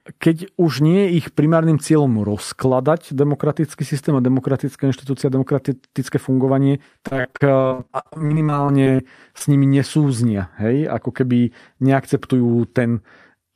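From 7.07 to 9.01 s, repeated packet loss (robotic sound) breaks up the speech: two dozen or so gaps, the longest 54 ms, each patched by extending the preceding sound. About a third of the stretch is concealed, so the voice turns choppy, with pieces missing.

At 9.39 to 9.42 s, just before "nimi nesúznia", a short concealed packet loss drops about 20 ms of audio. The decoder bridges it by continuing the last sound and blending back, leaving a brief smear rather than an audible hole.

Between 12.34 and 12.86 s, a jitter buffer speed-up trims the excess buffered delay by cutting short pitch-period segments repeatedly, around 50 ms in total. Playback runs at 108% speed with pitch unchanged, so this passage sounds hurried.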